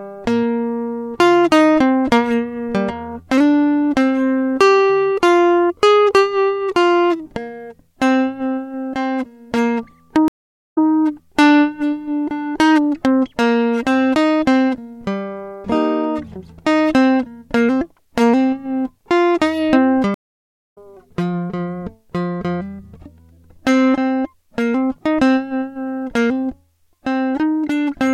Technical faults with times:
10.28-10.87 stream reconnect
20.14-20.78 stream reconnect

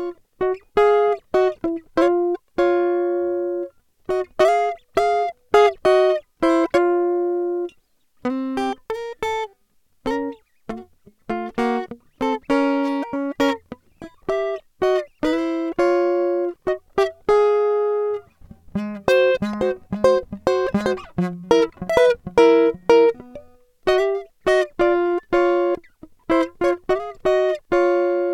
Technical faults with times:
none

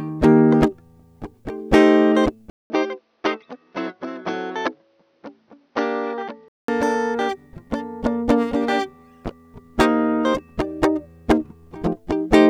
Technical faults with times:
2.50-6.68 input switched to a poorer device

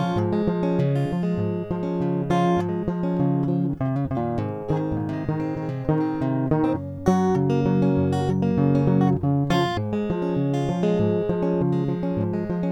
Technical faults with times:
none

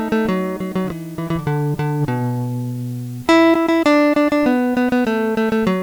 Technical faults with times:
0.00-5.82 low bit depth with dither

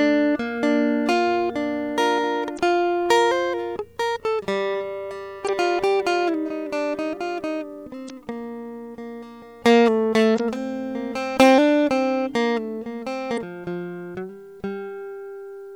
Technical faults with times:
2.55-2.59 damaged data in a compressed stream
5.45-5.49 damaged data in a compressed stream
8.06-8.10 damaged data in a compressed stream
10.36-10.40 damaged data in a compressed stream
13.34-13.38 damaged data in a compressed stream

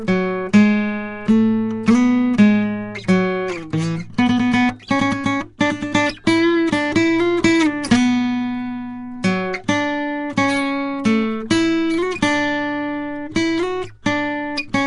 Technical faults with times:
0.00-14.87 Nellymoser compression

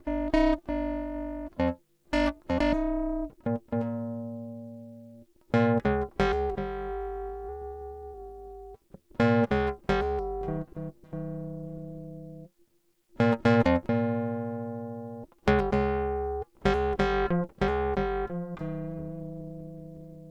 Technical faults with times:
0.00-20.31 overlap-add ripple

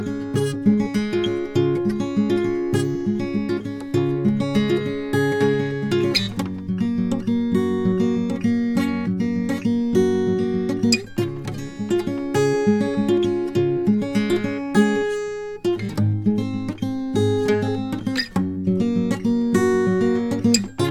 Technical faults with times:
none

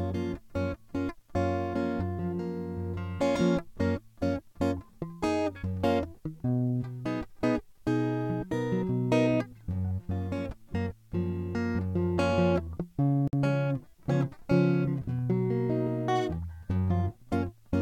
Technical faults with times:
13.28-13.33 gap at a join of encoded pieces

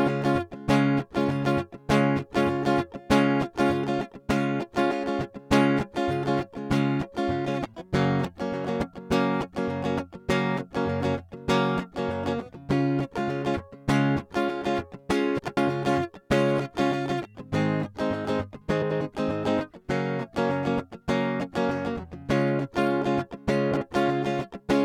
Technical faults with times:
15.38-15.57 frames out of order
18.81-19.01 frames out of order
23.72-23.82 frames out of order

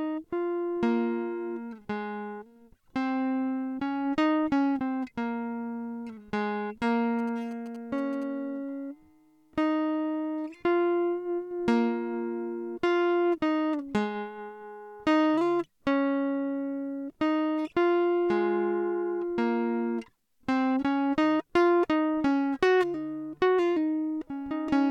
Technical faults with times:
7.19-8.24 GSM signalling bursts

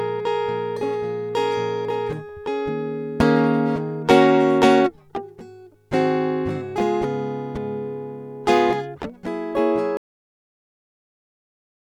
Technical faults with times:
9.97-11.90 cut-off end

